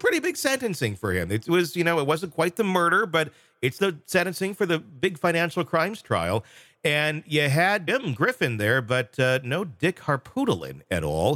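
Brief glitches break through the sound from 3.76 to 3.79 s and from 7.87 to 7.89 s, each about 20 ms long. These come from damaged data in a compressed stream: corrupted bytes make the decoder misread frames and lose sync.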